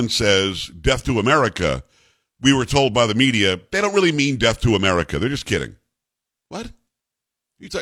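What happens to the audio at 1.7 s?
Nothing goes wrong at 1.7 s: the speech runs on intact through that moment, with no dropout, click or distortion.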